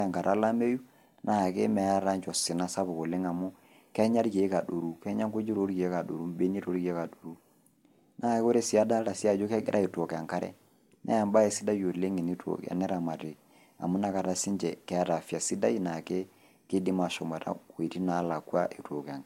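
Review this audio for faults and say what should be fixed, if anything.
Low-bitrate audio saved at a high bitrate, throughout: the speech has no content above 16.7 kHz, and the band below still carries the artefacts of the earlier lossy coding. A file that size should not have a ceiling that low, so the audio was likely encoded at a low rate first, around 65 kbit/s, and then re-encoded to MP3 near 192 kbit/s. The larger second file cannot restore what the first pass removed. To prevent this, encode once from the original uncompressed source at the final bitrate.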